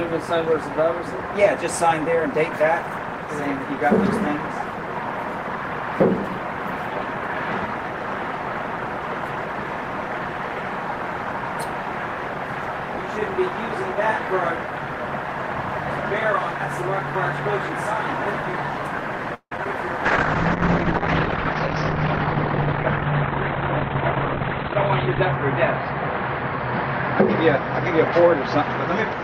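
A call audio freeze runs from 19.34 to 19.52 s. The sound stalls and is stretched for about 169 ms, with a stretch of roughly 60 ms of silence inside it, before continuing from where it halted. Nothing is lost; the audio simply arrives later afterward. This is likely a case of packets being held up in transit until the jitter buffer ran dry, so the receiver extended the last sound while it waited.

Short concealed packet loss follows at 19.57 s and again at 19.64 s. Each time about 10 ms of audio never reached the decoder in time, and the receiver patched the hole by continuing the preceding sound, carrying on its pitch if it was tonal or substituting shaped noise if not, then blending back into the real signal. These appear as brief smears or wobbles immediately after the freeze.

A call bitrate drop begins at 20.06 s and lasts to the end. The bandwidth estimate fell and the encoder cut from 32 kbps to 10 kbps, staying at the lowest rate for about 5.2 s. 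At that rate Opus codes more coarsely and narrows the audio band from 20 kHz to 4 kHz, so the sound turns muffled and rough, losing its upper frequencies.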